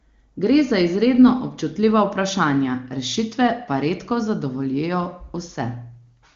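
No technical faults can be heard in this speech recording.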